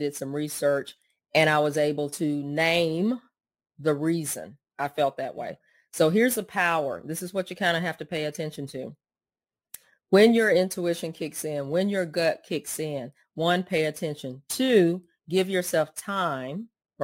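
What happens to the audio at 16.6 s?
At 16.6 s, as across the whole clip, crude rate conversion (consistent with 48 kHz to 44.1 kHz by nearest-sample dropping) leaves a gritty fizz roughly 25 dB down, visible as inharmonic spectrogram streaks tracking the speech.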